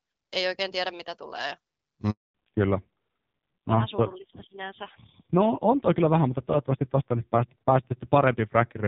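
Just after "oikein tiedä mitä tulee", a handover gap silences the call from 2.10 to 2.34 s. The speech stops abruptly for 240 ms while the link switches, unlike a dropout, which usually crackles or stutters. From 2.34 s to the end, a fallback to narrowband removes everything above 4 kHz. The lightly coded HD Voice before it gives way to a duller, rougher sound, which fits a low-rate narrowband codec around 5.9 kbit/s. Unlike a simple low-pass filter, this fallback also adds coarse codec grit.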